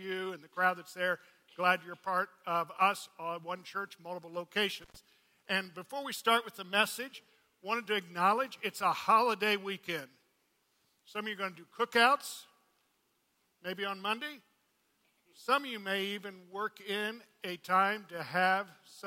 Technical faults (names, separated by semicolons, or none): intermittent contact